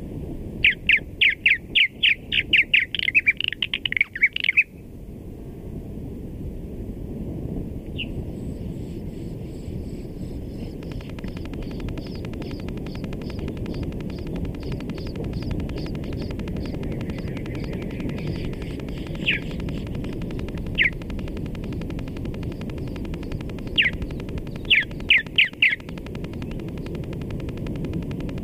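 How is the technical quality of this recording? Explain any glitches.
The recording has one sustained glitch. A train of clicks runs from 10.83 s to 28.39 s, likely equipment interference injecting pulses: regular ticks at 11.3 per second, peaking about 10 dB above the sound.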